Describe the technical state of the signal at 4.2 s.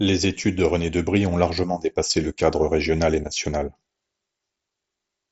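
At 4.2 s the audio is intact, with the speech carried through the wideband Bluetooth mSBC headset path and no fault present at that moment.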